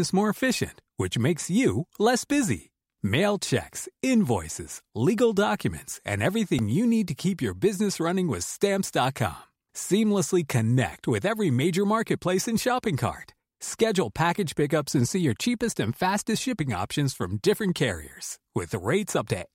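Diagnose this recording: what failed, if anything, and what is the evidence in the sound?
The playback buffer stage failed once, with a repeated buffer at 6.59 s. It falls between "invoices legal documents and" and "you need to keep". It sounds like a click or brief buzz, not a stutter. A piece of about 1.45 ms plays three extra times, which fits a 64-sample buffer. New audio arrived late, so the device replayed its last block. Hard joins at each repeat make the click. Essentially no audio is lost.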